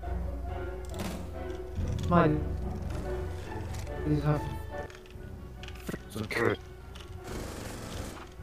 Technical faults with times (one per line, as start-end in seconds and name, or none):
0.00-8.43 channel delay (doubling)